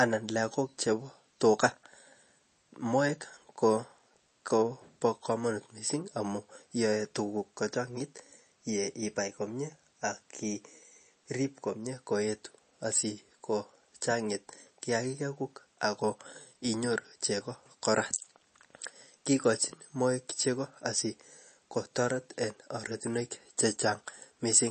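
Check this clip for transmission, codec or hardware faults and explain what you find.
One codec fault runs through the whole recording. The speech has no content above about 8.3 kHz, and the codec damage is plainly audible from start to finish. The likely cause is MP3 compression at a low bitrate, around 32 kbps. With so few bits, the encoder cuts the treble at a fixed point. It also drops weak frequency lines that flicker on and off between frames. The result sounds dull and watery. S sounds turn swirly and metallic, and consonant attacks smear.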